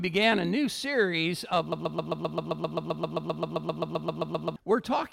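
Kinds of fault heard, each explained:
Broken-record loop: a 131 ms fragment repeats exactly 22 times from 1.72 to 4.56 s, likely a stalled player or stream resending its last buffer.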